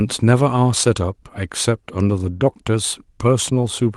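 No faults to report: the speech carries only the light coding texture of fullband Opus voice compression, with no dropouts, clicks, distortion or level problems.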